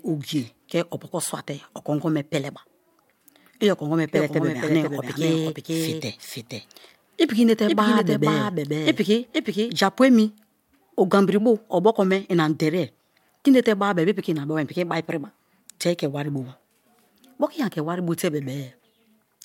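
From 4.15 to 9.71 s, a doubled audio track appears. A second copy trails about half a second behind, a few decibels quieter, starting and stopping abruptly. Likely a slower second capture path.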